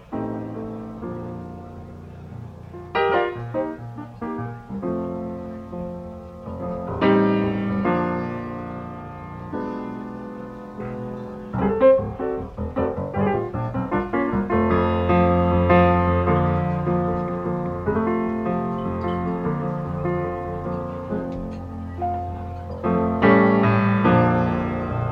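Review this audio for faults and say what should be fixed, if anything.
Nothing needs fixing, because the signal shows no technical faults anywhere in the recording.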